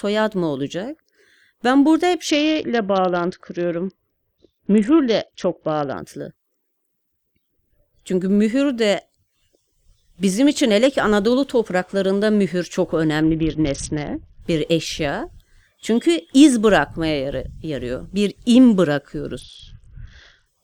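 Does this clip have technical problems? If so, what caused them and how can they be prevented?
Yes. The speech has three Bluetooth SBC bit pool drops: 2.3 to 6.0 s, 13.2 to 14.4 s, and 19.4 to 20.5 s. In each, the treble goes dull and a gritty noise rises. Then the sound clears. The link was congested, so the encoder cut its bit budget. Top sub-bands lost their bits, and the rest were coarsely quantised. The sound fits a drop from bit pool 28 to 7, near 66 kbps. Reducing radio interference and distance keeps the bit pool high.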